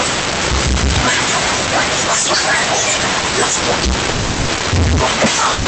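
From start to finish the speech carries a distortion, most likely a stuck bit, where one bit of every sample is held fixed, as from a broken data line or converter. About half the samples are pushed off by that bit's weight in a pattern that follows the waveform, so pauses fill with hiss instead of falling quiet. A waveform view shows steps riding on the signal and a noise floor that never reaches zero. A spectrogram shows broadband grit spread through the gaps, with speech energy ending near 8 kHz, the limit of the Opus call path it travelled through.

At 4.09 s a call audio freeze sets in and lasts to 4.50 s. Packets were likely delayed in transit until the jitter buffer emptied, and the receiver stretched the last sound into a fading buzz or hiss for about 390 ms. No audio is lost. Everything after it simply arrives 390 ms late. A second, shorter freeze runs from 5.52 s to the end, filling about 130 ms the same way. 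On a spectrogram both appear as smeared, repeated bands that fade instead of dropping to silence.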